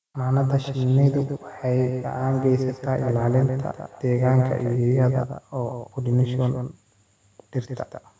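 A speech recording carries two faults. Throughout, a doubled audio track is heard: a dry, full-band copy trails roughly 150 ms behind, only a few dB quieter. A second, slower capture path is the likely cause. From 0.52 to 4.86 s, feedback echo between two devices appears. The words return at intervals of about 300 ms, growing thinner and more ringing, and peak around 22 dB below the speech. That happens when a second device in the room replays the call and the original microphone picks it up again. The band stops at 8 kHz, which fits normal call processing.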